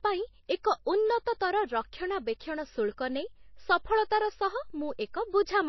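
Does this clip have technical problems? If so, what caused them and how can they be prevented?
Yes. MP3 compression runs throughout: nothing remains above 5.8 kHz, and the speech sounds plainly dull and watery. This is likely an MP3 encoder starved of bits, which fits a bitrate around 24 kbps, cutting the treble and dropping weak detail frame to frame. Encoding at a higher bitrate prevents this.

Pre-echo occurs at 0.63 s, 2.39 s and 4.10 s: a short hiss spreads 15, 10 and 11 ms ahead of sharp attacks, because the codec spreads noise sized for the loud onset across the quiet moment before it. A higher bitrate, or a codec that switches to shorter blocks on transients, avoids this.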